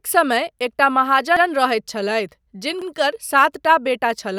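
A short stutter in the speech, once right after "समय एकटा" at 1.37 s and again at 2.82 s, where an 85 ms piece plays twice with a hard join. This is a repeated buffer: fresh audio arrived late, so the last buffer replayed, which fits a 4096-sample buffer.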